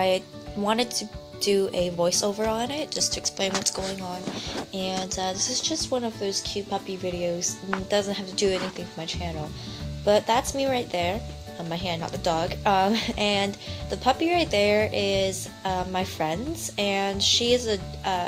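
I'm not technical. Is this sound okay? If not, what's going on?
Yes, it's fine; nothing in it sounds broken or glitchy, so there's nothing to worry about.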